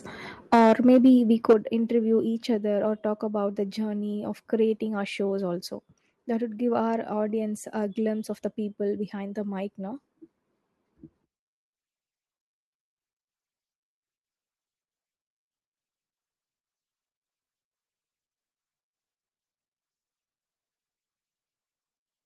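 Microphone overload appears from 0.53 to 1.1 s and again from 1.49 to 1.53 s. The loudest syllables turn harsh and crackly because their peaks push about 8 dB and about 7 dB past the converter's limit. The likely cause is input volume set too high, so the converter flattens the waveform tops. A small share of samples is affected in the first stretch and nearly a third in the brief second one.

Microphone volume stepped down at 0.54, 1.53 and 2.55 s. At each point, voice and background drop abruptly together, by about 2 dB, about 6 dB and about 3 dB. The first two drops follow right on the distorted peaks. This is likely the call software reacting to the clipping by cutting the device's input volume in single steps.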